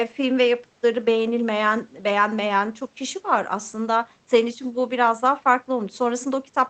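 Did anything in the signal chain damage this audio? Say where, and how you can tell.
No, nothing stood out on listening; the faint room noise sits about 42 dB below the speech, and the top end stops near 8 kHz in the way a call codec at this setting would limit it.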